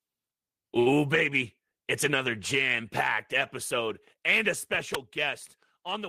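At 0.79 to 0.88 s a short stall from a late packet holds the speech for about 67 ms with nothing lost, showing as a flat, smeared band on the spectrogram. At 4.95 s a sharp snap, likely an electrical switching spike, appears as a thin vertical line across all frequencies and a brief spike in the waveform.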